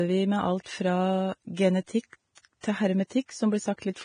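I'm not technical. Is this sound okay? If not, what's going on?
No. The speech sounds hissy and grainy throughout, with the highest treble missing above about 9.7 kHz. That is likely heavy Vorbis compression squeezing the file too hard.

Pre-echo also appears at 2.42 to 2.45 s and at 2.61 to 2.63 s: a brief hiss just before sharp sounds, which come out softened. The compression spreads its noise backward into the quiet moment before each sudden sound.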